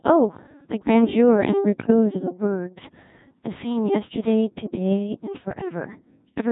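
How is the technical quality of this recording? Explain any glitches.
Technical quality is pretty rough. The whole speech clip has gone through a very low-rate vocoder, and there's a short burst of corrupted decoding near the start.

The Codec 2 vocoder colours everything from start to finish, and the damage is heavy. It doesn't keep the waveform. It sends only pitch, voicing, loudness and a rough spectral outline, and the decoder rebuilds the voice from sine waves. That's why it sounds robotic and buzzy. The sparseness fits something like a 1.6 kbit/s mode.

Around 1.80 to 1.90 s you get bit errors on digital voice radio. Flipped bits landed in the vocoder's parameters, and at this rate every bit helps set a whole frame's pitch, level or tone. The voice lurches into a warbly, bleepy garble for roughly a tenth of a second. That's about three frames' worth, with something like one bit in twenty going wrong.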